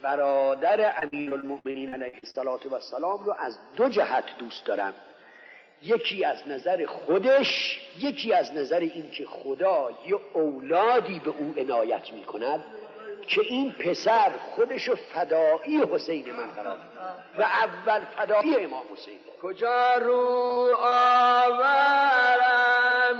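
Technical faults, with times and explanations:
0.99–2.36 s, repeated packet loss (robotic sound): About a dozen short dropouts arrive in quick succession, the longest 64 ms. Each hole is patched by stretching the last sound forward. Roughly a third of this stretch is filled that way. The result is choppy, with pieces missing.
20.26–21.01 s, repeated packet loss (robotic sound): Four brief gaps recur, none over 24 ms. The concealment is lighter here, under a tenth of the span. It still leaves choppy sound with pieces missing.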